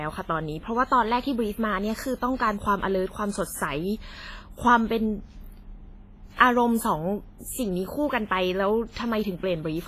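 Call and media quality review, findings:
Speech throughout sounds ringing and washy, with hiss pumping alongside the voice and nothing above 15.3 kHz. Likely WMA compression: long transform blocks smear quantisation noise over tens of milliseconds and zero out weak components. The heavy damage fits a low bitrate around 24 kbps.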